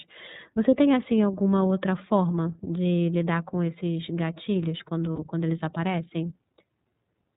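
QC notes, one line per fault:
throughout iLBC codec: the speech is band-limited to about 4 kHz and has a slightly rough, synthetic edge, plainly audible. This fits iLBC's 30 ms frame mode at about 13.3 kbps, where each frame's excitation is coded independently and the upper band is discarded.
5.13–5.19 s lost iLBC frames: after "lidar com esses gatilhos", a 60 ms stretch of lost audio, likely two frames, is concealed by a held, faintly buzzy vowel as the decoder repeats the last pitch cycle with added noise. Normal speech resumes immediately at "quando eles aparecem".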